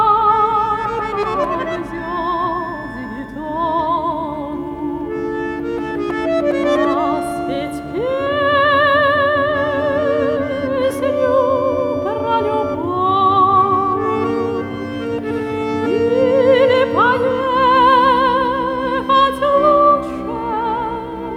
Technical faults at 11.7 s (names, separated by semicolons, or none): none